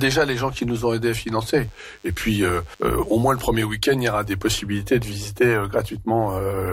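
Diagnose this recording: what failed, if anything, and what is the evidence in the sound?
A DECT cordless phone buzz enters the analogue stage from 1.44 to 3.44 s. Radio bursts every 10 ms get rectified, leaving a faint, thin 100 Hz buzz.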